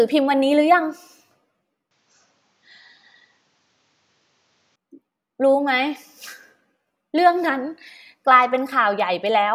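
The input likely switched to a poorer device from 1.91 to 4.76 s, cutting above 7.6 kHz; the speech turns dull, without gap or level jump.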